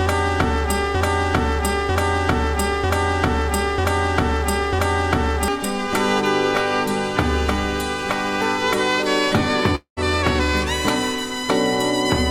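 From 0.95 to 5.48 s a broken-record loop repeats one 0.95 s fragment five times, likely a stalled player; the waveform shows identical blocks side by side.

At 9.75 to 9.99 s a long network dropout leaves a 0.21 s fading buzz, then silence, likely lost packets; the spectrogram shows smeared energy thinning to a blank gap.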